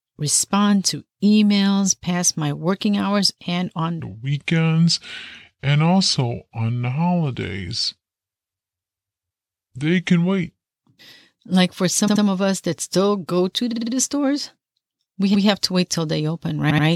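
Right after "working hours and on", at 4.00 s, the speech drops into a section at the wrong speed that runs to 10.72 s. It plays at about 0.73 times normal speed, so everything slows and sinks roughly five semitones, deep and dragging, with pitch and tempo shifting together. That's likely the audio being clocked out against the wrong rate for that stretch, then snapping back once it ends.

After that come four bursts of repeated frames, where the same slice of compressed audio gets played again and you hear a stutter. From 12.07 to 12.23 s a 78 ms block plays two extra times. Just after "that still go to", from 13.72 to 13.92 s, a 52 ms block repeats four extra times. From 15.34 to 15.47 s a 131 ms block comes back once. After "wait till they open", from 16.69 to 16.85 s, a 78 ms block repeats twice more. Each one stretches the audio by the repeated time.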